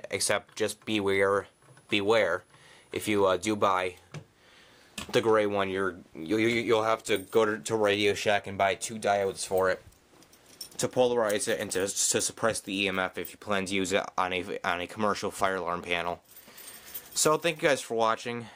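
No technical faults are audible anywhere in the recording.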